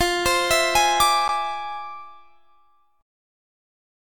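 From the very start to about 1.04 s, the level going into some stage exceeds what it can pass by about 4 dB, so every peak above that ceiling is sliced off flat. This is hard clipping. The squared-off tops generate harmonics high in the spectrum that were never in the original, so loud moments in that first second carry a gritty crackle and a hard, brittle edge, since the overload is moderate rather than extreme.

At 1.28 s there is a gap between stream segments. The time stamps at the join between two segments, which appear to be about 4 s long, don't line up, and the player fills the missing 11.6 ms with digital silence. Nothing is deleted, but the sound stops abruptly and resumes just as abruptly. The hard edges make the short hole register as a distinct click-like dropout.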